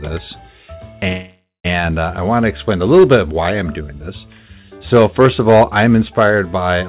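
The audio comes through a narrowband call path, with nothing above 4 kHz, which fits a 64 kbps G.711 mu-law link. From 1.08 to 1.66 s there is a call audio freeze. The last sound is held as a fading buzz that ends in about 180 ms of silence. The audio then resumes exactly where it stopped, so nothing is lost and everything after it runs about 0.56 s late. That separates it from a packet-loss dropout, which deletes material. The likely cause is packets stalling in transit and the jitter buffer running dry. Hard clipping appears from 2.94 to 3.16 s and again from 4.93 to 6.37 s. Peaks are driven about 6 dB past the ceiling and cut flat. It follows signal level, and the flat tops add harmonics high in the band. The codec's quantisation noise, by contrast, sits under the whole signal, not just the loud parts.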